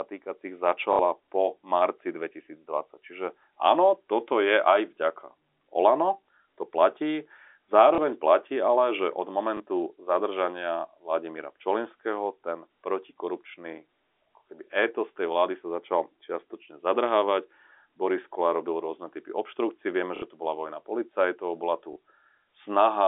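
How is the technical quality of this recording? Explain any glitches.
The recording has five short dropouts concealed by packet loss with the last packet repeated, heard over a narrow telephone-band line with G.711 coding.

The stutters fall at 0.93 to 0.99 s (just before "po marci"), 7.95 to 7.98 s (before "platí ale že od"), 9.57 to 9.60 s, 20.16 to 20.22 s, and 21.93 to 21.96 s (after "bola vojna policajtov bola"). Each gap is 30 or 60 ms, which fits 30 ms packets. The receiver loops the last chunk, and the longer ones give a brief robotic buzz near 33 Hz.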